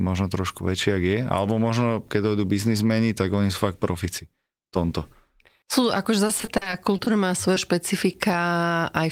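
From 6.27 to 7.08 s the speech breaks up with repeated packet loss, giving a robotic sound. Around nine separate holes open in that stretch, the longest about 40 ms. The receiver patches each one by extending the last stretch of sound, about 190 ms in total, roughly a quarter of the span. Another 140 ms simply drops out. The result is choppy, mechanical-sounding speech with audible pieces missing, as one hole follows closely on the last.

At 7.54 to 7.58 s there is a single short concealed packet loss. About 20 ms of audio failed to arrive in time. The decoder bridged it by continuing the preceding sound for roughly 20 ms before blending back into the real signal, and the remaining 20 ms was not recovered. It is heard as a brief smear or wobble in the speech, and a short consonant at that point may be clipped away.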